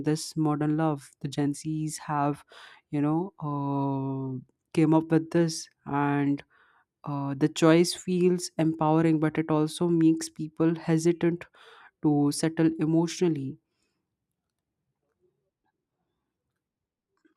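Speech, with nothing technically wrong to report at any point.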